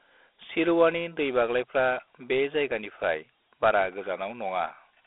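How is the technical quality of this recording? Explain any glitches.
Quality is limited by one fault lasting the whole speech clip: Dialogic VOX ADPCM coding. Each sample is squeezed into 4 bits, which fits a 32 kbps rate, so a gritty hiss rides on the speech. A spectrogram shows energy confined to a 300 Hz to 3.5 kHz line band, blank above 3.8 kHz.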